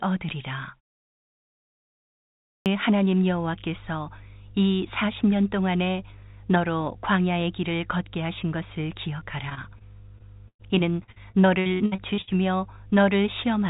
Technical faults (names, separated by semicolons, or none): clipped start after a pause; mains hum; repeated packet loss (robotic sound)